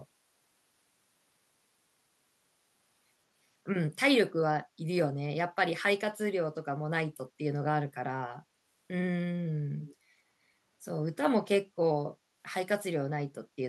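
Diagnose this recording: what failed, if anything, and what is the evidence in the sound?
Echo leak at 9.8 to 9.95 s, in the call-processing stage: a faint, brief copy of the speech returns about 194 ms late, well below the direct level. The likely cause is the far end's echo canceller letting some loudspeaker pickup escape back.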